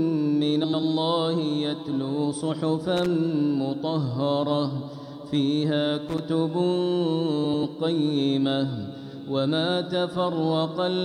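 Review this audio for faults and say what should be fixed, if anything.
Frames out of order at 0.64–0.82 s and 7.44–7.64 s: two adjacent blocks of about 93 ms swap places, giving a garbled flutter. Worth fixing with proper sequence-number reordering in the jitter buffer.

Loose connector crackle at 2.97–3.06 s and 6.09–6.19 s: a contact briefly breaks and remakes, chopping the signal into scratchy bursts. Reseat or replace that cable and clean the jack.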